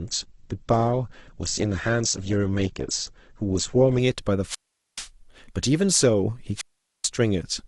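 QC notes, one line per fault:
0.00–4.00 s, adaptive stream starting at a low bitrate: the player opened on a lean stream, with nothing above 8.2 kHz and audible smearing, which fits Opus near 12 kbit/s. At 4.00 s the spectrogram's top band fills in abruptly with no gap, consistent with a step to about 64 kbit/s.
4.44–5.08 s and 6.55–7.09 s, wireless microphone squelch dropout: each time the radio signal fades, hiss swells, then the receiver's squelch mutes the output for 431 ms and 432 ms. The waveform shows a flat hole and the spectrogram a blank column before the sound returns.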